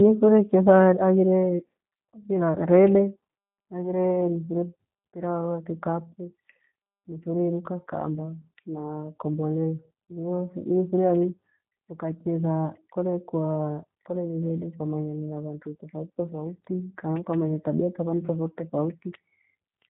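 Throughout the speech, G.729 codec damage is plainly audible. The sound is rebuilt from a vocal tract model, a pitch predictor and sparse pulses, giving a rough, synthetic texture that fits an 8 kbit/s G.729A coder. Nothing above 3.8 kHz survives.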